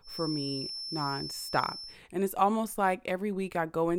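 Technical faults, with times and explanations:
0.0–2.0 s, feedback whistle: a loudspeaker-to-microphone loop was likely held just below the point of runaway gain, so one tone near 5.3 kHz keeps ringing without building up. It sits as a thin, steady whistle about 10 dB beneath the speech, swelling and fading slowly in level.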